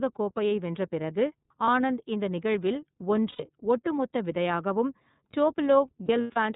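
Throughout the speech, the iLBC codec holds everything below 4 kHz, leaving a flat empty band above it on a spectrogram. The voice sounds clear but slightly rough and synthetic, with plainly audible coding damage from its 30 ms frames, which fits the 13.33 kbps mode.

Lost iLBC frames first appear at 1.64 to 1.69 s, between "கோப்பையை வென்ற பிறகு" and "ஆனந்த் இந்த நிகழ்வில்". About 30 ms is missing, and the decoder repeats the last pitch cycle mixed with noise, giving a brief buzzy held sound. On a spectrogram, the harmonics flatten into a short, smeared, unchanging stripe.

At 3.29 to 3.43 s, between "பிறகு ஆனந்த் இந்த நிகழ்வில்" and "ஒட்டுமொத்த விதையாகவும்", about 90 ms is lost. The concealment holds a breathy, fading vowel-like tone. The waveform shows a repeating cycle shrinking in amplitude, and the speech snaps back almost immediately afterward.

From 6.05 to 6.37 s, 150 ms of losses are scattered over about 300 ms, with the longest run around 100 ms. 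This produces a stuttering string of buzzy held fragments. The spectrogram shows several frozen, periodic patches interrupting the normal, shifting harmonic pattern.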